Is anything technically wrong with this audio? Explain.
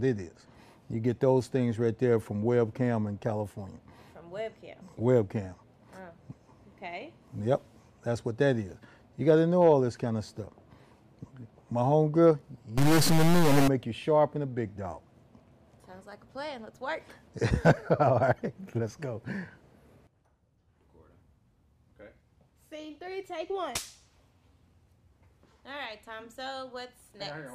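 Yes. From 12.78 to 13.68 s the audio turns harsh and buzzy, with a noise floor filling the quieter stretches. This is likely a stuck bit: one data bit held fixed, pushing about half the samples off by a step near -20 dBFS, a fairly high-order bit.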